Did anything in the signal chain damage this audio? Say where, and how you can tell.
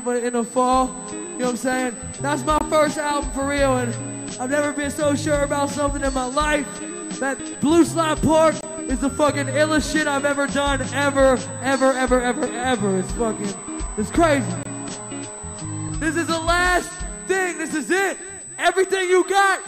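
Yes. A steady USB whine at 8 kHz runs through the whole clip, at about 15 dB below the signal. That is the 125-microsecond microframe rate of the bus leaking in through power or ground in the analogue wiring. Its fixed pitch sets it apart from mains hum or a codec artefact.

A gap between chunks appears at 2.58, 8.61 and 14.63 s. Each is a hole of about 23 ms, one after every 6 s chunk, which points to storage or playback joining fixed chunks, with padding or a late start at each join. Unlike a network dropout, the timing is perfectly regular and nothing is missing on either side of each hole.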